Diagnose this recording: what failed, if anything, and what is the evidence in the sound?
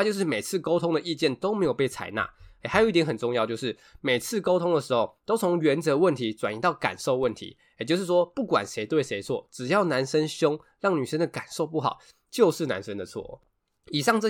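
The speech carries two DC steps, at 1.65 s and 7.23 s, each heard as a low thump while the talking carries on unchanged. The zero line jumps by about -35 dBFS, as when a converter recalibrates or an offset-carrying input is switched in, then drains away through a 20 Hz high-pass. On the waveform the baseline lurches and sags back; a spectrogram shows a brief vertical smear concentrated at the very lowest frequencies.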